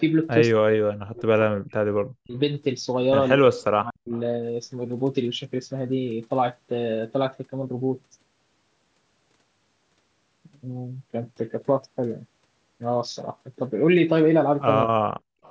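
Speech suppressed in double talk from 0.55 to 1.63 s, then 2.06 to 2.35 s and 3.39 to 4.13 s: the voice sinks by as much as about 40 dB or drops out in pieces, likely because an echo canceller, hearing both sides at once, turned everything down.

Echo leak at 4.12 to 4.21 s: a faint scrap of the voice returns 241 ms late, about 30 dB under the speech, likely loudspeaker pickup the echo canceller failed to remove.

Speech suppressed in double talk again from 14.87 to 15.25 s, with the same deep dip.

Echo leak from 15.43 s to the end: the same quiet delayed copy, 241 ms behind the voice.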